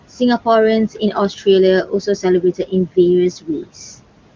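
Across the whole clip the background noise drops away in the gaps and swells back up under the speech. These are noise suppressor artifacts. The suppressor judges each frequency band, frame by frame, to be either steady room noise or signal, and pulls the noise bands down by about 18 dB. Because that decision keeps changing, the residue pumps instead of sitting as an even floor.

The same processing also causes speech cut by the noise suppressor in four places: 0.93 to 1.15 s, 1.85 to 2.24 s, 2.41 to 2.97 s, and 3.41 to 3.7 s. In each span, parts of the speech suddenly go faint or sound swallowed, as though soft sounds and word endings were being clipped off. The suppressor mistook low-level speech for background and turned it down along with the noise. The dips are about 10 dB in the first two spans, about 17 dB in the third, and about 18 dB in the last. Only short pieces are lost each time, roughly a tenth of a second in the early spans and a little more in the later ones.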